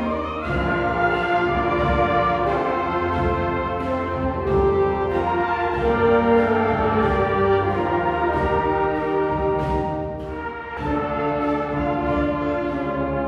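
At 10.77 s, compressed frames are skipped: roughly a tenth of a second of sound vanishes, consistent with about four frames of roughly 26 ms each. The audio jumps ahead rather than leaving a gap of silence.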